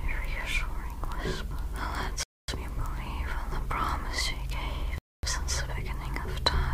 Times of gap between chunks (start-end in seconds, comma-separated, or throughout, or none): 2.23-2.48, 4.98-5.23